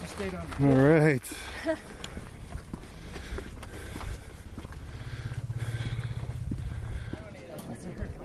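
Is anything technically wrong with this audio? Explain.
Yes. There is a call bitrate drop from 2.84 s to 6.85 s. The call's bandwidth estimate fell, so the encoder was told to spend far fewer bits. The coarser coding fits a fall from about 32 kbps to about 18 kbps, with the lowest rate held for about 2.65 s. Across that stretch the sound turns rougher and more watery, with less fine detail, until the bitrate recovers near 6.85 s.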